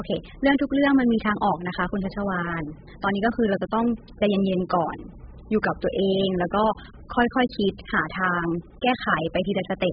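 The speech has likely been through heavy AAC compression, with damage that points to AAC-LC at a very low bitrate, around 8 kbps. From start to finish nothing remains above 5 kHz, leaving the sound dull and smeared, with warbling, fizzy sibilants.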